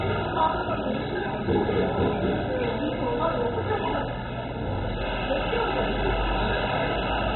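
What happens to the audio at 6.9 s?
At 6.9 s the audio is still carrying the dull, gurgling damage that runs through the whole clip, consistent with heavy MP2 compression, likely from encoding at a very low bitrate in the region of 16 kbps. Layer II divides the signal into 32 sub-bands and, starved of bits, shuts off the upper ones entirely, so nothing survives above 4 kHz. The bands that remain are coarsely quantised and flicker on and off, giving a granular, bubbling texture. That grain distinguishes it from a simple low-pass filter, which would dull the top end while leaving what remains clean and steady.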